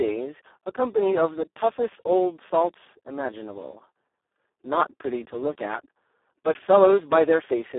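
From start to finish the speech sounds hoarse, buzzy and close to robotic, squeezed into a narrow telephone band of roughly 300 Hz to 3.5 kHz with nothing at all above about 3.8 kHz. This is heavy Speex codec damage. The CELP encoder has so few bits for the excitation that it approaches vocoder behaviour, which fits a setting near 4 kbps, and the voiced sound loses its natural clarity and becomes a synthetic, noisy buzz.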